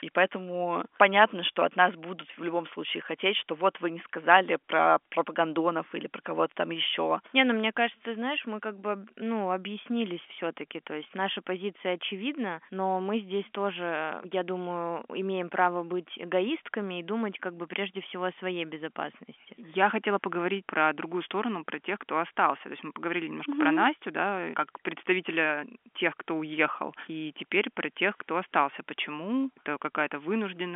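No technical faults are audible.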